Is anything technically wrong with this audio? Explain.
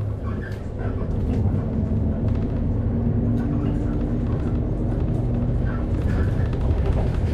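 No, nothing in this audio points to a technical problem in the signal chain.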